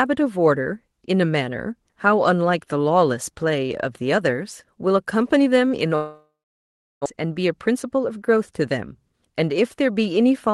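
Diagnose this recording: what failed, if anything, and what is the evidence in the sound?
Network stage, likely a long network dropout. At 5.95 s the speech stops being replaced by new material. The receiver stretches the last sound into a fading buzz, and that concealment gives way to roughly 0.7 s of near-silence before the speech resumes at 7.08 s. The whole gap lasts about 1.1 s. The speech picks up further along, not where it left off, so about a second of content is gone. The delay settles around 70 ms longer afterwards.

Buffer stage, jitter buffer speed-up. From 7.68 s to 8.53 s the speech runs about 6% fast with its pitch unchanged, giving a slightly hurried delivery. This follows the dropout, when delayed audio arrived in a burst and overfilled the buffer. To trim the excess latency, the receiver cut many short pitch-period-length pieces, around 50 ms in total. The band limit near 12 kHz throughout is consistent with the Opus call path.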